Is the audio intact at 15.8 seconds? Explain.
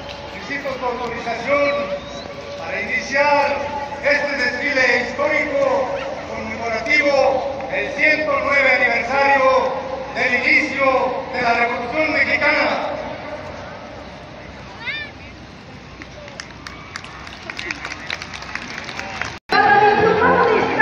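Yes, at 15.8 seconds the audio is intact, with no dropout, click, distortion or other fault at that moment.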